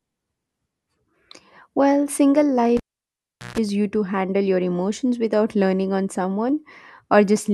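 Cable pulled and plugged in, 2.77 to 3.58 s, in this speech clip: a pop, 0.76 s near silence, a 0.15 s burst of 60 Hz mains buzz while only the tip touches, then a pop before "you to handle your".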